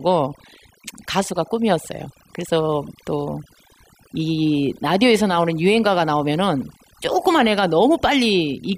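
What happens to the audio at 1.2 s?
Overdone noise removal is present at 1.2 s, as it is through the entire clip. A noise reduction stage set far too aggressively cuts individual frequency bands down or out whenever their level sits close to its estimate of the noise floor, and the softer components of the speech get removed along with the noise. The background in the gaps drops and breaks up into twinkling specks.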